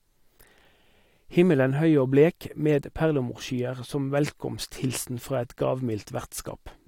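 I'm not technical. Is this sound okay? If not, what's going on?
Yes, nothing in this recording points to a technical problem; the signal holds steady with no breaks, glitches or distortion at any point.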